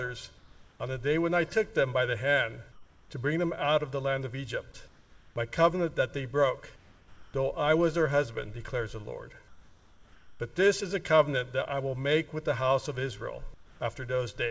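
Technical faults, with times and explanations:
0.38–0.80 s, 2.72–3.10 s, 4.88–5.36 s, 6.76–7.34 s, 9.48–10.40 s, 13.54–13.80 s: comfort noise in place of the background. In each pause, lasting 0.26 to 0.92 s, the quiet background (about 30 dB below the loudest sound) loses its texture and becomes a flat, even hiss about 1 to 5 dB quieter. The likely cause is discontinuous transmission: the sender stopped sending and the receiver filled in synthetic noise.
7.31–7.34 s: onset clipped by the voice detector. When the sound returns at the end of the gap that starts at 6.76 s, its first 30 ms are missing, so it begins abruptly, without its soft attack. The detector likely reacted late, and comfort noise covered those moments.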